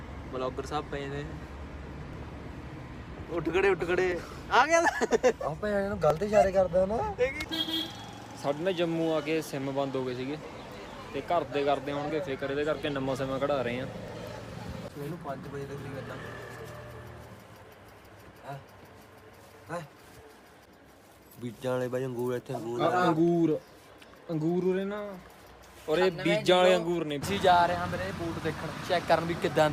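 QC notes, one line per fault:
2.13, 4.12, 6.10, 12.10, 14.08 and 16.07 s: overlap between stream segments. Adjacent 2-second segments carry overlapping timestamps, so the player trims 4 to 13 ms of real audio at each join. The waveform jumps, heard as a click or tiny skip recurring at segment boundaries.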